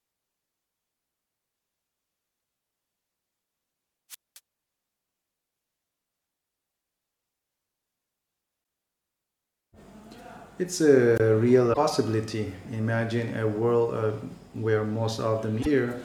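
A short chirp at 2.37–2.39 s comes from damaged data in a compressed stream: corrupted bytes make the decoder misread a frame, lose sync and hunt for the next header. At 4.10–4.39 s a brief swell of hiss gives way to a hole of near silence lasting about 0.22 s before the sound returns. This is a wireless microphone squelch dropout, where the FM signal faded until the receiver's squelch muted the output. Similar compressed-stream blips follow at 6.66–6.69 s and 8.61–8.63 s. A much shorter squelch mute of about 23 ms falls within 11.15–11.21 s. Longer corrupted-frame squawks come at 11.70–11.78 s and 15.59–15.67 s.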